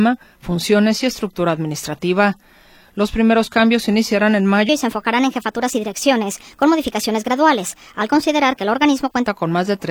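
From 4.69 s to 9.27 s there's a section at the wrong speed: it runs 1.28 times too fast, so the sound jumps up about four semitones and feels hurried. Most likely it was fitted to the wrong clock, with pitch and tempo shifting together.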